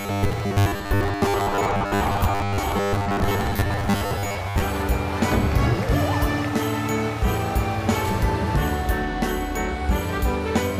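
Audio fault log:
0.01 to 4.62 s, robotic sound from repeated short buffers. The sound becomes a rigid, metallic buzz pitched at 100 Hz, which still loosely tracks the shape of the original. The likely cause is audio arriving too slowly, so the playback fills gaps by looping a short slice of about 10 ms. Roughly 70% of this stretch is such repeats, with the real audio skipped. The loop rate sets the fixed 100 Hz tone.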